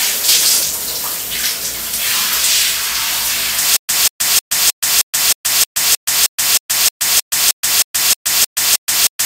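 From 3.77 s to the end of the clip, the audio falls into a stutter with silent gaps. A fragment of about 187 ms plays, then about 125 ms of digital silence follows, and the same fragment returns every 312 ms, seventeen times over. The likely cause is a stalled player or stream that replays its last buffered piece at each retry and then runs dry. The material that should have continued after 3.77 s never arrives.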